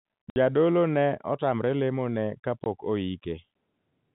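At 0.30 s the speech drops out for 60 ms, a gap that fits three lost 20 ms packets replaced by silence. The waveform falls flat with hard vertical edges, and the spectrogram shows a blank column. A second single-packet hole of 20 ms follows at 2.64 s, right after "ne otamre lemo ne", equally abrupt. Both dropouts ride on G.711 telephone coding, which caps the spectrogram near 4 kHz.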